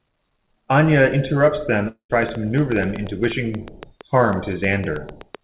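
A long network dropout runs from 1.88 to 2.11 s. The stream likely stopped arriving, so the receiver stretched the last sound into a fading buzz for about 214 ms, then left 100 ms of silence, and speech resumes with about 220 ms missing.

A train of clicks starts at 2.23 s and continues to the end of the clip. There are about 7.3 pulses per second at an uneven pace, each well above the speech and audible even in pauses. The likely source is nearby interference or a faulty connection or power supply.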